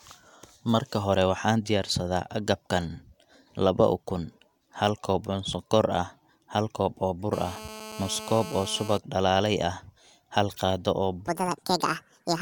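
From 7.33 to 8.98 s, a nearby 2G handset on a call transmits in bursts about 217 times a second, and the audio circuitry rectifies those radio pulses into the signal path. The result is GSM phone buzz: a hard, raspy tone at 217 Hz, dense with harmonics and unrelated to the speech, sitting about 14 dB below it. Because the phone is in a call, the buzz holds steady until it cuts out just before "dalaale ah hal qaado".

From 11.28 s to the end, the final section was likely played against the wrong clock, running at 1.75 times its recorded speed. This is a section at the wrong speed: tempo and pitch rise together right after "ah hal qaado oo", lifting the speech by about ten semitones so it sounds high, thin and hurried.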